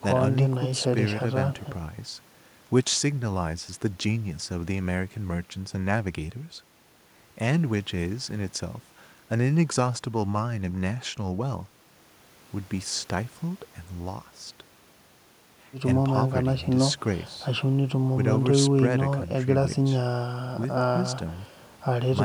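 No audible technical faults.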